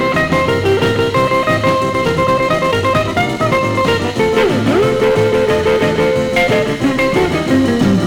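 From 1.81 to 3.87 s the pace suddenly jumps to about 1.48 times normal while the pitch stays put, so the sound turns rushed. This is a time-stretched section, likely from software squeezing the passage to fit a shorter length by dropping short slices.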